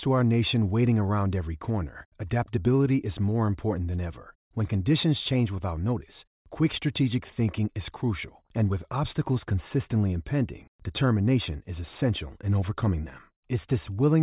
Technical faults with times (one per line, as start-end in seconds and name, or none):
none